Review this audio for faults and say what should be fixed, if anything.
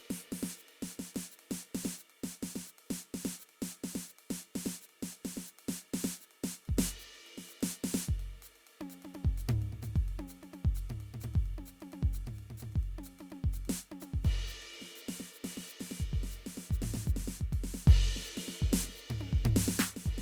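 Nothing in the music calls for a fix. No problem can be heard anywhere in the recording, so it can stay as it is.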